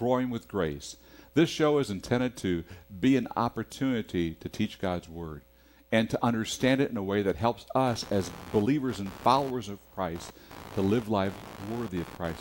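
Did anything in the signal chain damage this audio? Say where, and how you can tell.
Yes. From 7.87 s through to the end, a buzzy, chirping scratch rides under the sound, pulsing at around 70 times a second and sitting roughly 20 dB below the signal. It tracks nothing in the audio itself. This is computer activity noise in the analogue wiring: shifting load from the processor, graphics card or mouse modulates the ground the audio circuit shares with the computer, and that ground movement gets added straight into the signal.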